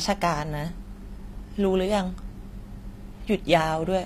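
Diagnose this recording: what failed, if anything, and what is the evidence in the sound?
The failure sits at the codec stage, and it runs through the whole clip. The treble of the speech sounds bright but false. S sounds come out gritty and metallic, and the high band does not blend with the lower harmonics. Nothing survives above about 14.9 kHz. This points to HE-AAC compression, likely at a low bitrate around 24 kbps. The codec kept only the lower spectrum and rebuilt the top by copying lower bands upward, so the damage is plainly audible.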